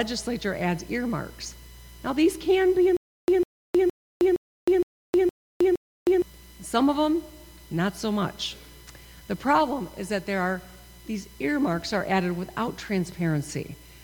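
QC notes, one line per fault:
2.97–6.22 s, stutter with silent gaps: a short burst of about 151 ms plays seven times over at a steady pace of one every 465 ms, with about 314 ms of dead digital silence after each repeat, giving a mechanical, clipped stammer. This is likely a stalled player or stream that replayed its last fragment at each retry before running dry, so the sound that belonged in this span never plays.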